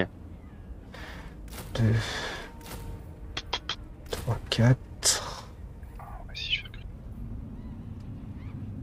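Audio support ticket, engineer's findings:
Section at the wrong speed, 6.93 s to 8.83 s: playback runs 1.16x fast, pitch up about three semitones, tempo and pitch rising together, unlike a pure pitch shift. Likely a clock or rate mismatch.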